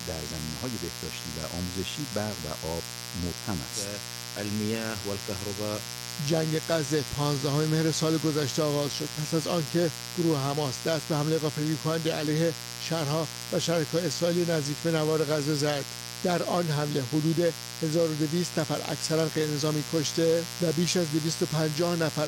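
From start to finish a mains buzz sits under the sound, built on a 60 Hz supply and quite loud, only a little below the programme itself. Sharp switching spikes, twice per mains cycle, from something like a dimmer, a rectifier or an unshielded line, leak into the signal and spray harmonics up into the kilohertz range. That gives a steady, raspy edge, unlike plain hum, which stays a smooth, low tone without that gritty upper content.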